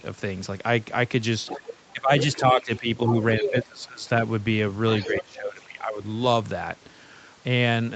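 From 1.46 to 1.73 s, a second voice leaks in about 10 dB under the speech. It is the other side's voice leaking through, likely loudspeaker echo the canceller left behind. It returns from 2.2 to 3.65 s, louder at about 5 dB down, and again from 4.92 to 5.6 s, faint at about 15 dB down.

Speech suppressed in double talk follows, from 1.93 to 3.07 s, from 3.39 to 4.06 s and from 5.06 to 6.01 s. Both sides overlap. The canceller likely mistook the talker for echo. The voice dips by roughly 15 to 20 dB.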